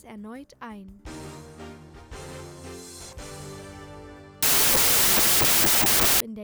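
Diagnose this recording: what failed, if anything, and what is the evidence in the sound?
From 4.43 s to 6.20 s the sound turns into loud noise with the original buried beneath, running 1.5 times too fast and pitched up. It's a wrong sample width fault in sample-format conversion: 16-bit data read as packed 24-bit, splicing bytes across neighbouring samples.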